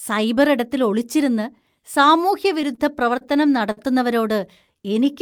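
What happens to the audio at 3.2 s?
A short stall from a late packet, 3.18 to 3.23 s. The jitter buffer emptied. Speech is held 29 ms too long, with a slight buzz or dip.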